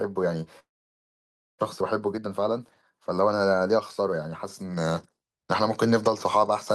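At 0.59 s the sound stops, a brief fading buzz gives way to silence, and it returns at 1.63 s with about 0.6 s missing. A long network dropout is likely.

From 1.80 to 5.17 s a jitter buffer speed-up trims tiny pitch-period slices. The speech runs about 11% faster at unchanged pitch, sounding hurried.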